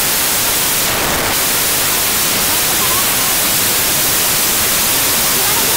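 Wrong sample width runs from start to finish: 16-bit data appear to be read as packed 24-bit values, so each value mixes bytes from neighbouring samples. That gives loud noise burying the original sound, which plays 1.5 times too fast and high in pitch.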